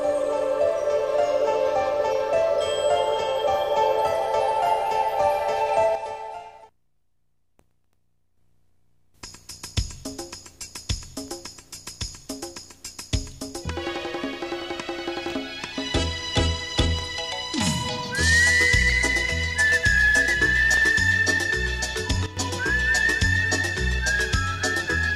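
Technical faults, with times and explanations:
5.95–8.37 s: sudden gain jump. Sound and background noise drop together by about 6 dB with no ramp, then return abruptly, likely an unsmoothed digital gain change.
22.26–22.37 s: sudden gain jump. A brief step down of about 11 dB in sound and noise alike, likely a gain setting applied sample to sample.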